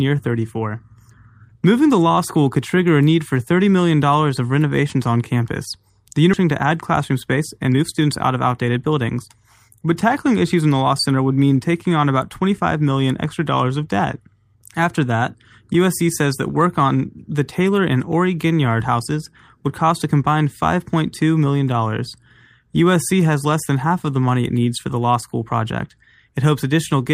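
A skip ahead occurs at 6.33 to 6.35 s. Roughly a second of speech never reaches the listener: it is dropped, and with nothing filled into the gap, playback lands directly on later audio that was already queued. The cut is a hard splice. The sound before and after the jump meets almost seamlessly, so what is heard is an abrupt lurch forward rather than a silence, as though part of the utterance had been edited out.

Jitter buffer speed-up follows from 6.43 to 9.29 s. The buffer is holding more speech than its target, and the receiver trims the excess by removing many short slices, each a pitch period or a few long, in rapid succession. Over this stretch roughly 300 ms disappears and playback runs at about 112% speed. Pitch stays where it was, but the delivery sounds noticeably hurried until normal pacing resumes after 9.29 s.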